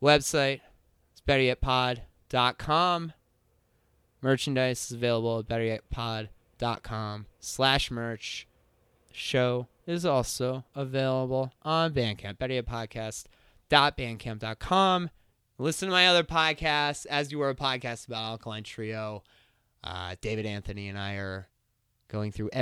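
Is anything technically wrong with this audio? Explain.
No, nothing is technically wrong with this audio.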